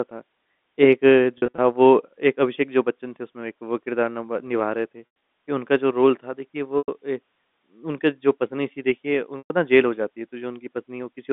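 Packet loss with pitch repetition occurs four times: 1.38–1.58 s as short scattered gaps, 5.06–5.22 s with one 100 ms run, 6.78–6.88 s and 9.38–9.50 s. The receiver fills each gap by repeating the last pitch period, so brief losses sound like a buzzy, held tone. The longer run fades toward silence before the sound returns. A waveform shows identical repeating cycles tapering off, and a spectrogram shows frozen, flat harmonics within the narrow telephone band.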